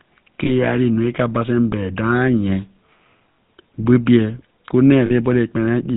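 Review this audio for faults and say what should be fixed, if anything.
The whole clip carries the GSM full-rate codec's buzzy, gravelly roughness and nothing above 4 kHz, which fits a 13 kbps link. Use a wideband codec instead.

There are lost GSM frames at 0.44–0.51 s, 3.37 s and 5.06–5.11 s, covering about 20, 60 and 40 ms. At each one, the last good frame is repeated, so you hear a brief metallic ring. Adding jitter buffering or error protection would cut down the losses.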